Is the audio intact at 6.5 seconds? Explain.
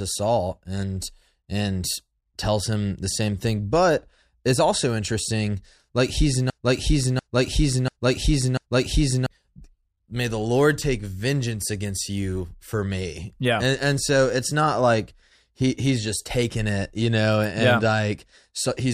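No. At 6.5 seconds a broken-record loop begins and runs to about 9.26 s. A fragment of speech about 0.69 s long repeats exactly, back to back, four times. The speech stutters in a rigid cycle instead of moving forward. The likely cause is a stalled player, encoder or stream that kept resending the last fragment it held. Whatever should have played in those 2.8 seconds is missing.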